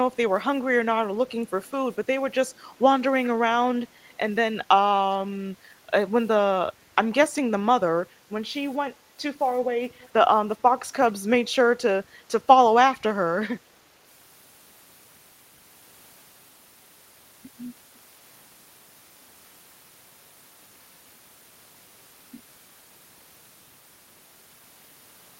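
Speech with two short echo leaks, at 9.97 to 10.08 s and 12.92 to 12.98 s: faint scraps of the voice return about 0.4 s late, far below the speech. The cause is likely a far-end echo canceller missing part of its loudspeaker pickup. Unlike room reverberation, the echo is a distinct delayed copy rather than a smooth tail.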